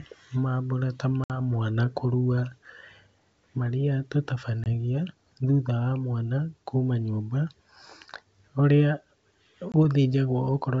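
Hard-edged silent holes cut the speech at 1.24–1.38 s (about 60 ms, roughly three packets), 4.64–4.67 s and 9.72–9.76 s (20 ms each). After each hole, the sound returns slightly distorted before settling. This is packet loss on an ADPCM call. The decoder's predictor and step size drift out of step with the sender's, and the wideband G.722 coding, consistent with 64 kbit/s, takes some tens of milliseconds to resynchronise.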